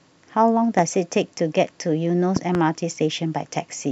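A short speech clip with two loud pops riding on top of the talking. The first is a single sharp pop from 0.79 to 0.81 s, roughly 10 dB above the speech. The second, from 2.36 to 2.57 s, is a quick double pop, louder at about 15 dB over the signal. The speech keeps going underneath both. They're likely sudden voltage pulses from a plug, switch, static discharge or driver glitch getting into the chain.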